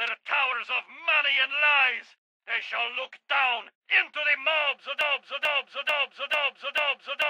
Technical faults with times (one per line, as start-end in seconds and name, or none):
5.01-7.29 broken-record loop